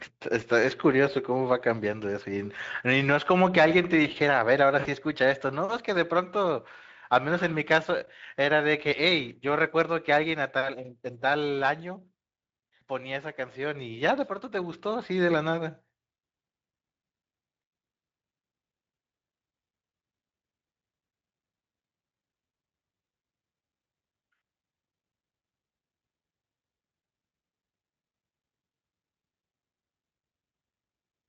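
Packets went missing in the VoIP stream at 4.79 to 4.88 s, a 60 ms gap that fits three lost frames, and at 12.79 to 12.81 s. The Speex decoder concealed each gap by extending its last pitch and filter at falling gain, leaving a brief buzzy or noisy, fading smear of packet loss concealment.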